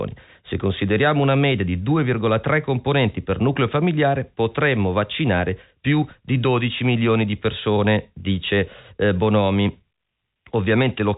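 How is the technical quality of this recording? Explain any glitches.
The recording has no glitches to explain; its technical quality stays steady throughout.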